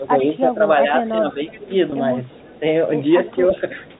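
From the start to 1.7 s the speech keeps sinking in level, by about 10 dB at its deepest, for roughly 0.7 s in total, and it dips again more gently, by about 5 dB, from 2.44 to 2.63 s and more deeply, by about 10 dB, from 3.35 to 3.88 s. This is speech suppressed in double talk: with both ends talking at once, the echo canceller likely could not tell this talker apart from its loudspeaker echo and turned everything down.

A faint, delayed copy of the speech trails behind it at 0.18 to 0.27 s, 1.04 to 1.59 s, 2.29 to 2.60 s, 3.26 to 3.36 s and 3.89 to 3.99 s. It arrives 347 ms late and sits between about 20 and 35 dB below the direct speech, quietest in the last scrap. This is echo leak: the far end's microphone likely picked up its own loudspeaker, and its canceller left part of that pickup in the return path.

At 1.90 to 1.92 s and again at 3.58 to 3.60 s the speech briefly holds on a buzzy, stretched tone. 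Each time, one 20 ms packet went missing, and the receiver bridged the gap by repeating the last pitch period. This is packet loss with pitch repetition, and because each gap is so short, the repair never fades into silence.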